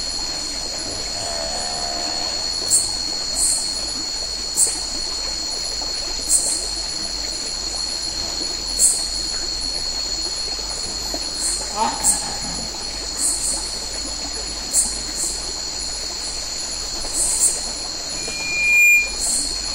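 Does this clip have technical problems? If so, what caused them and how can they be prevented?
Yes. A microphone picked up its own loudspeaker, closing a loop with gain above one at 2.4 kHz, producing a loudspeaker feedback squeal from 18.16 to 19.22 s that swells over under a second to about 10 dB above the audio. Keep microphones out of the loudspeakers' coverage, lower the gain, or notch the ringing frequency.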